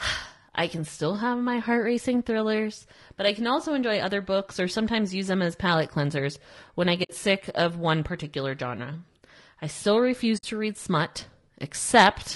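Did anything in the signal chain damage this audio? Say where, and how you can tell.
Yes. Low-delay AAC compression affects the whole clip, likely from the codec stage of a call path such as AAC-ELD at a low rate near 32 kbps. The speech sounds rough and grainy, with noise filling the gaps between harmonics and a thin, synthetic-sounding top band. Short transform frames resolve pitch harmonics poorly, and at this bitrate the encoder can't spend enough bits to keep them clean.

AAC frame loss with muting, a network-stage fault, appears at 7.03 to 7.10 s and again at 10.37 to 10.44 s. Each is a soft-edged gap of about 60 ms, the first after "palate cleansers when I" and before "sick of one particular", the second after "I still" and before "to read smut". Lost frames were decoded as silence, and the overlapping windows faded the sound out and back in.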